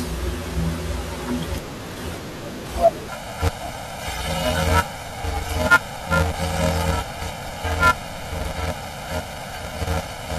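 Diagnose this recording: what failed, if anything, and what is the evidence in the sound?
The failure is at the sample-format conversion stage: planar audio is read as interleaved from 3.09 s to the end of the speech at 10.38 s. Each block stores all its left samples and then all its right, but it is read as alternating pairs, so every block plays twice at double speed. The blocks are short, about 2.67 ms, which fits a 128-sample block. The speech turns into a robotic buzz at 375 Hz with no clear octave shift.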